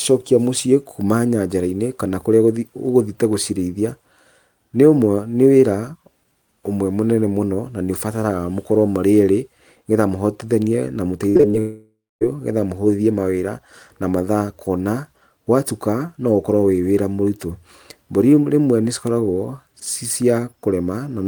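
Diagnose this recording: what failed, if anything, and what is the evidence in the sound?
Repeated packet loss (robotic sound) hits the network stage from 11.29 to 11.55 s, right after "getha mũhotithanie na": four gaps, the longest 56 ms, are patched by extending the previous sound, so nearly half of that stretch is synthetic and the speech turns choppy and robotic.

A long network dropout follows from 11.59 to 12.23 s. About 620 ms never arrives; the concealment stretches the last sound into a fading buzz, then roughly a quarter second of silence before the speech resumes with that part missing, likely a burst outage on the network path.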